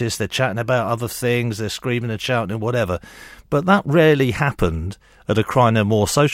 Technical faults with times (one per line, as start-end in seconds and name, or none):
none